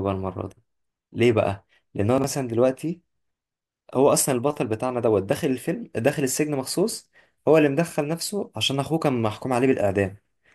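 A speech recording with two brief spots where chunks play out of order. At 2.18 to 2.24 s, one 20 ms chunk turns up two chunks late, so the sound jumbles for a moment around the hard joins. At 6.90 to 6.94 s the same thing happens with a 20 ms chunk landing one chunk late. Nothing's actually missing; it's a sequencing slip in the buffering or write path.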